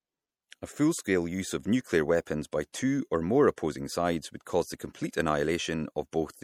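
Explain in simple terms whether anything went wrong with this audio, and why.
From start to finish the speech sounds watery and swirly, with metallic s sounds, likely caused by MP3 compression throwing away detail to save space.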